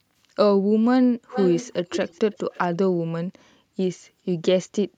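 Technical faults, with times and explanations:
1.32 to 1.73 s and 1.91 to 2.67 s, echo leak: a copy of the speech returns about 0.43 s late, roughly 10 dB quieter. This is likely a loudspeaker echo that the far side's canceller missed.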